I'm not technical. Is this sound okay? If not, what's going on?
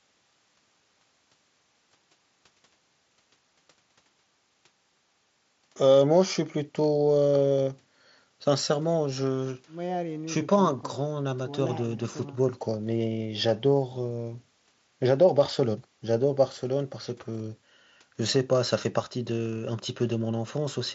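Yes, no faults found.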